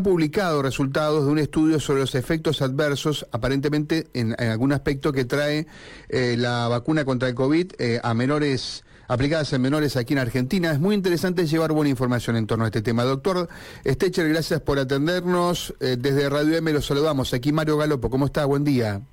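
From 5.73 s to 9.73 s the audio plays as an adaptive stream at a lower bitrate. For those four seconds the player fell back to a leaner encoding, most likely because the connection slowed. The treble is cut off above roughly 10.2 kHz, and coding artefacts rise. The drop in quality, which fits a step from about 96 down to 32 kbit/s AAC, is abrupt at both ends, with no gap in playback.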